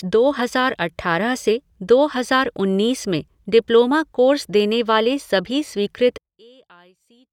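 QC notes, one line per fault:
6.18–7.32 s, one channel inverted: after "देने वाले सभी स्वीकृत" the speech drops about 31 dB, likely one channel's reversed polarity cancelling the centred voice when the channels are summed to mono.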